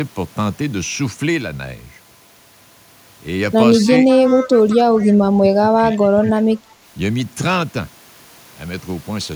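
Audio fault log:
3.86–3.90 s, speech suppressed in double talk: a quick dip of about 5 dB, just a flicker. It's likely the canceller mistaking overlapping talk for its own loudspeaker echo and briefly turning the signal down.
4.11–4.78 s, echo leak: a delayed copy trails the speech by 194 ms at about 15 dB below it, likely from a canceller letting some loudspeaker pickup slip back down the line.
4.76–6.44 s, speech suppressed in double talk: the same ducking returns much harder, dropping about 20 dB across roughly a second and a half. The speech thins and sinks while both sides overlap, likely because the canceller clamps down on everything it can't separate.
4.98–5.08 s, echo leak: a brief scrap of that 194 ms echo pokes through again, quieter at about 25 dB under the speech, likely leftover loudspeaker pickup sneaking past mid-suppression.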